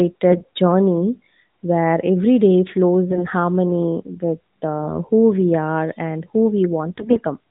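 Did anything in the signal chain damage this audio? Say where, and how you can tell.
Yes, AMR bit errors on the network link: at 0.30–0.46 s before "journey where every day", 3.08–3.25 s before "harmony with", and 6.88–7.21 s after "we are and who". Flipped, weakly protected bits misplace excitation pulses, so pitch and level hold but the voice turns gargly. A spectrogram shows smeared harmonics, and the waveform has ragged patches.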